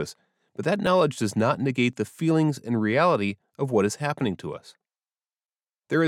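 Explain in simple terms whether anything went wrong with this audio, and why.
Two small jumps break into this speech, at 0.87 s between "but that" and "does not", and again at 1.93 s between "does not" and "the feelings and reality". Each is a tiny jump with no gap of silence, where only a sliver of sound, well under a hundredth of a second, goes missing. The likely cause is a dropped buffer (overrun): the recording software fell briefly behind, the hardware overwrote that bit, and the two sides were joined directly.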